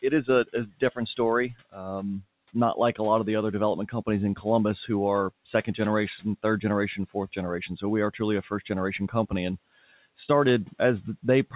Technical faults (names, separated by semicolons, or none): speech cut by the noise suppressor